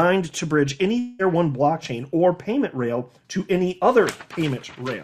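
A long network dropout, likely, cut off the incoming audio stream from about 0.99 s to 1.22 s. Roughly 200 ms of sound never arrived and is not played. The receiver covered almost the entire gap, about 196 ms, by extending the last sound it had into a fading buzz or hiss. No dead silence opens up. The audio then resumes at 1.22 s, skipping over the lost portion rather than picking up where it left off.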